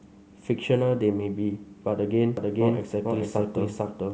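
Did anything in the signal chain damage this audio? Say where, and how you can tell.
Yes. From 2.37 s to the end, a doubled audio track appears: a second full-band copy of the speech trails by roughly 0.4 s at about equal level, switching on abruptly with no decay or room colour. This likely comes from a duplicated capture path or buffer.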